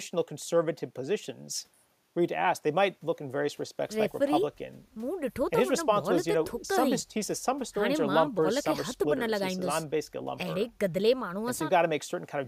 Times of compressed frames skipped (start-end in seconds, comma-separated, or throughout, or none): none